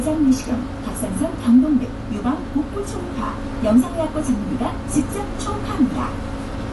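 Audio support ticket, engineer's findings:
Likely AAC compression (AAC-LC) at low bitrate, throughout, 0 s to end. Encoder short on bits, so it lowers the bandwidth and quantises coarsely against its hearing model. Result: hard ceiling, nothing above 11.5 kHz, top end dull. Plainly audible codec damage: smeared transients, warbly or fizzy texture on sustained and noisy parts of the everyday sound. Cut-off and artefact level point to around 32 kbps.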